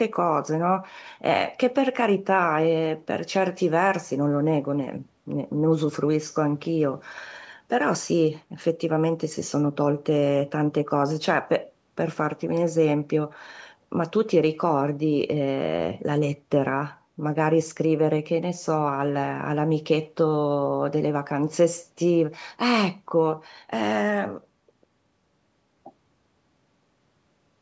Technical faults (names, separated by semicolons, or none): none